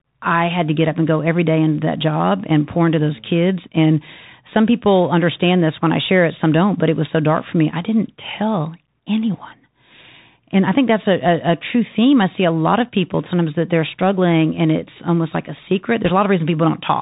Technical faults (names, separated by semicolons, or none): Bluetooth CVSD headset codec; uninitialised buffer; bit errors on a Bluetooth voice link